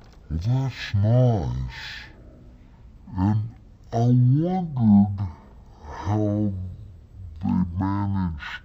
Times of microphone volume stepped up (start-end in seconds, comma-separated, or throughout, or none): none